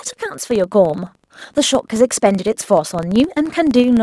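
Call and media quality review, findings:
Filter restarted on every block, throughout, start to end. Symptom: steady buzz at 23.4 Hz riding on the speech, louder on loud passages, fading in pauses. Probable component: block-based filter stage. Mechanism: filter state discarded between blocks, each block starting from silence, leaving a small transient at every boundary; rate fits a 1024-sample block.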